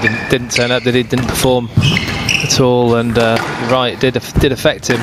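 Gain pumping runs through the whole clip: the level keeps dropping on each loud sound and rising again in the gaps, with a swing of around 20 dB, so loud and soft passages sit close together and the audio sounds squashed. The likely cause is input gain set far too high, with a fast limiter or compressor clamping it down on every loud moment. Unlike a noise gate, the level never cuts off; it bends smoothly down and back up.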